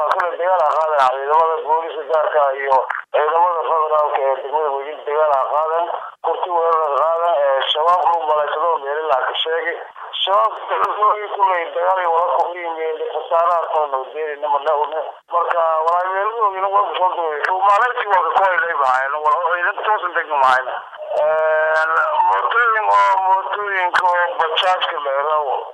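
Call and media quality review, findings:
Repeated buffer at 10.84 s: playback device starved, replayed last block once, which fits a 5 ms buffer. Heard as a brief click, with about 5 ms of audio lost.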